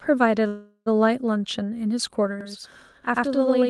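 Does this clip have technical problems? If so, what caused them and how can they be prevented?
Yes. A call audio freeze runs from 0.47 to 0.88 s: the last sound is stretched into a fading buzz that ends in about 60 ms of silence, then the audio resumes where it stopped. The likely cause is delayed packets draining the jitter buffer. On a spectrogram it shows as smeared, flat horizontal bands over those 0.41 s with nothing missing afterwards. Better network prioritisation and adaptive jitter buffering would prevent it.

From 2.41 s to the end there is channel delay (doubling). One channel lags by about 93 ms, which fits a 4096-sample buffer, and the mono sum gives an equal-level slap echo. The waveform shows each onset repeated 93 ms later, and the spectrogram shows comb-like notches. Aligning the channels before the downmix would prevent it.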